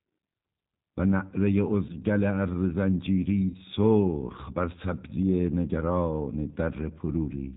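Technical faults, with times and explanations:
throughout, G.729 codec: the speech is cut off above 4 kHz and has a slightly rough, synthetic texture, which fits G.729 at 8 kbit/s. The decoder rebuilds each 10 ms frame from a vocal tract filter, a pitch predictor and a few pulses. A simple band limit would stay smooth, but this roughness is plainly audible.
1.87–1.96 s and 3.50–3.57 s, VoIP packet loss concealed by the speech codec: about 20 ms and then 40 ms of audio went missing, which fits one lost packet and then two. There is no silent gap. The decoder extends its last pitch and filter into a buzzy tone or coloured noise that fades, and the sound stays weak and distorted briefly after the lost stretch while later frames recover from the guessed state.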